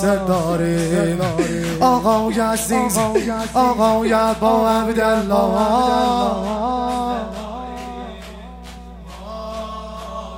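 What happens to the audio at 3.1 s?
At 3.1 s the audio carries mains hum, present for the whole clip rather than starting there. A ground loop or nearby transformer is coupling the 60 Hz power line into the signal, producing a steady low tone with some low harmonics, roughly 20 dB below the sound.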